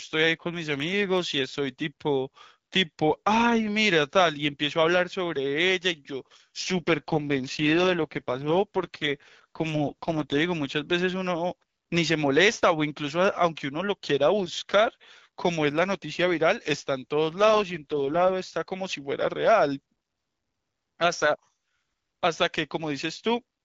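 From 6.61 to 10.40 s, and again from 17.33 to 18.33 s, there's an AMR rate drop. The HD Voice speech keeps its full band with no gaps but turns rough and raspy, which fits the codec stepping down from 12.65 to 6.6 kbit/s while the link was weak.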